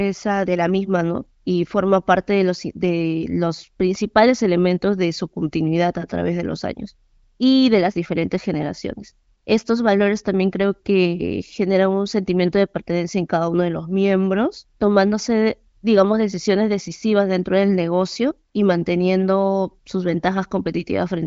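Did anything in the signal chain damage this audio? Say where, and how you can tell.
No, nothing in the chain has damaged this speech. It has passed through an AMR wideband (HD Voice) codec, audible as a band limit with nothing above about 7.5 kHz, and the coding sounds like one of AMR-WB's highest rates, around 23 kbit/s, which leaves at most faint traces.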